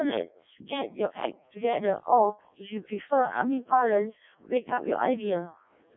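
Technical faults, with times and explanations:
Throughout, Codec 2 vocoder: the speech is robotic and buzzy, band-limited to roughly 200 Hz to 3.7 kHz, with heavy damage that fits the lowest 0.7 kbit/s mode. Only pitch, voicing, energy and spectral envelope survive, and the decoder rebuilds the voice from sine waves instead of the original waveform.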